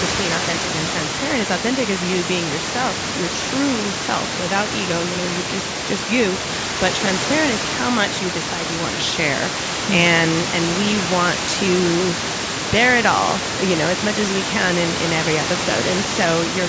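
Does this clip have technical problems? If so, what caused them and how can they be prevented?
No, there are no technical faults in this speech clip. The call microphone processing limits the sound to nothing above 8 kHz, and room noise sits only about 5 dB below the speech.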